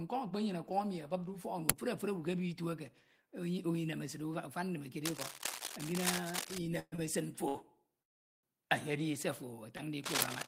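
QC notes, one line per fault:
1.70 s, uninitialised buffer: a loud 2.9 ms crack, which fits a 128-sample block played before any audio was written to it.
5.04–6.58 s, cable scratch noise: dense, uneven scratching at about the speech level, likely from a worn cable or connector being moved.
6.79–6.94 s, call audio freeze: the last sound is held and fades to about 30 ms of silence within a 125 ms fill, likely while the jitter buffer runs dry. Speech resumes intact, 125 ms later.
6.96–7.00 s, short stall from a late packet: a sound is stretched by 23 ms until the late packet arrives. Nothing is lost.
7.48–7.57 s, short stall from a late packet: a sound is held 65 ms too long while the buffer waits. Speech then continues from the same point.
8.03–8.45 s, call audio freeze: a 404 ms gap, almost all of it silence, which likely reflects delayed packets emptying the jitter buffer. Speech then resumes with nothing missing.
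9.77 s, short stall from a late packet: right after "se ofo" a sound is stretched by 16 ms while the buffer briefly underruns.
10.03–10.48 s, cable scratch noise: rustling bursts at about the speech level run to the end of the clip, likely from the same contact-resistance fluctuation.
10.22 s, uninitialised buffer: another loud 2.9 ms crack of garbage samples inside the scratching, again matching an unfilled 128-sample block.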